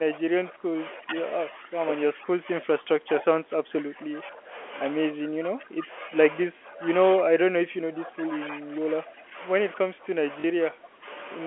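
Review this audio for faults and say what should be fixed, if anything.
Speech suppressed in double talk dips the talker's level seven times: 0.0–1.19 s, 1.5–1.75 s, 2.13–4.53 s, 5.14–6.12 s, 6.47–6.87 s, 7.2–9.38 s and 9.76–11.07 s. Most drops reach about 15 dB. The deepest, at 6.47–6.87 s, reaches about 20 dB. The likely cause is the echo canceller. It cannot tell this talker from loudspeaker echo while the far side is also speaking, so it pulls the whole signal down. Prevent it by using an echo canceller with proper double-talk detection, or a headset so there is little echo to cancel.

Packet loss with last packet repeated appears at 10.40–10.44 s, inside the last suppressed stretch. About 40 ms of audio goes missing, which fits two 20 ms packets. The receiver replays the previous packet to fill the gap. The replay seldom lines up with the pitch, and the sound briefly stutters and turns robotic. 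Prevent it by improving network reliability or enabling packet loss concealment that interpolates instead of repeating.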